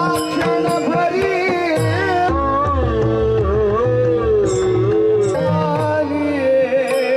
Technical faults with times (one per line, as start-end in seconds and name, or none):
2.29-5.34 section at the wrong speed